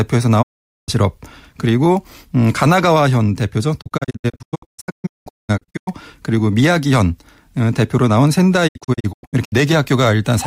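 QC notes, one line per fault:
0.41–0.90 s, digital broadcast dropout: the receiver stopped getting usable frames, so it mutes with a 20 ms fade and the speech drops out for about 0.45 s before good frames resume.
3.80–5.89 s, digital broadcast dropout: many short holes, none longer than 0.19 s, scattered across about 2 s. The gaps come in steps that fit 32 ms frames failing their checks.
8.67–9.54 s, digital broadcast dropout: a shorter broken stretch with holes up to 0.1 s. The speech sent during each hole is lost.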